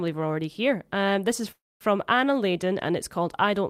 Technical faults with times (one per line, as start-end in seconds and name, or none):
1.51-1.83 call audio freeze